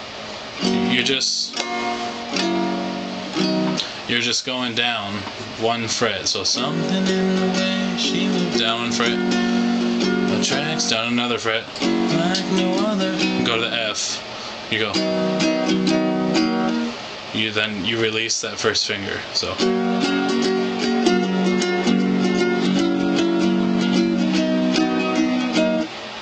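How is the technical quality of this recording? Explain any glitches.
Quality holds up well until about 19.68 s, where an adaptive stream at a lower bitrate takes over. The connection slowed, so the player switched without a gap to a lean version, which fits a drop from 96 kbit/s AAC to 16 kbit/s HE-AAC. Through to the end, codec artefacts rise.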